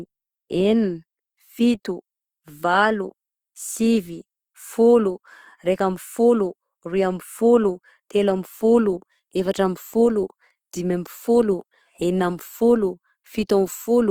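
Opus compression throughout this speech: plainly grainy, rough upper bands filled with noise, likely from music-mode encoding at a rate that fits about 24 kbps.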